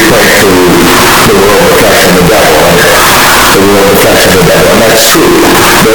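Float read as integer affects the whole recording, most likely because 32-bit float samples were read as 32-bit integers, so each sample's sign and exponent bits set its level. The waveform is driven into a near-square shape at an almost fixed, high level, making the sound uniformly loud and harsh, with background noise as prominent as everything else.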